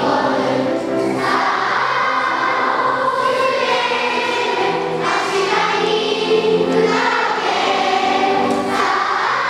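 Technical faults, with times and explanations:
No technical faults can be heard anywhere in the clip. There is nothing to time or explain.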